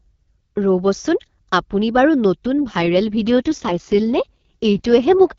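From 2.66 s to 5.08 s, just after "আপুনি বাৰু নতুন", the speech turns rough, raspy and synthetic, with no gap or loss of bandwidth. This is an AMR rate drop: the wideband codec falls from 12.65 kbit/s, where it sounds lightly coded, to 6.6 kbit/s.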